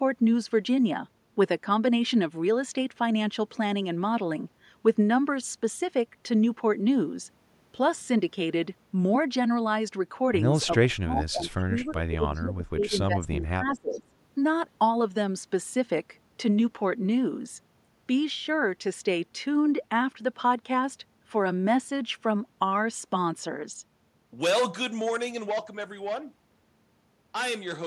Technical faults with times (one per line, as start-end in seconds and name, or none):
10.85-14.11 speech suppressed in double talk
12.35-12.41 echo leak
13.76-13.99 echo leak